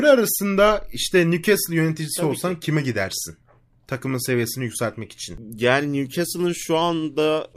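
No technical faults can be heard in the speech at any point.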